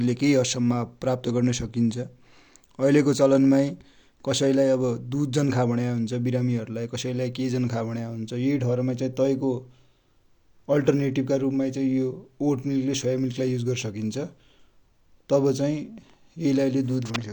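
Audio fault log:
No fault to log.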